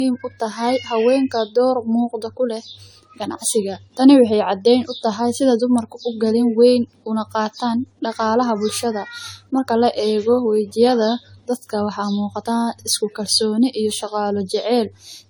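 Speech with generation loss throughout. It sounds swirly, smeared and hollow, with blurred attacks. This is likely repeated AAC-LC encoding around 64 kbit/s, about five passes.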